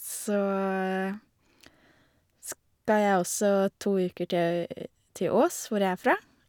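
Nothing in the recorded speech points to a technical fault anywhere in the signal.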